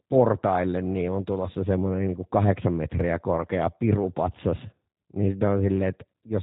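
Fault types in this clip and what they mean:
G.729 codec: the whole clip has that narrowband VoIP sound, with nothing above 4 kHz. The speech stays intelligible but comes out plainly rough and a bit synthetic, like it's been rebuilt from a vocal tract model and sparse pulses, which fits an 8 kbit/s G.729 encode.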